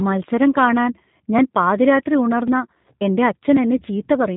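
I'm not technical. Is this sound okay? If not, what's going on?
No. The speech has been squeezed through the G.729 codec, a phone-call compression method, for the whole clip. It rebuilds the voice from a rough model instead of sending the real sound. Everything high-pitched is cut off, so it sounds dull, slightly rough and artificial.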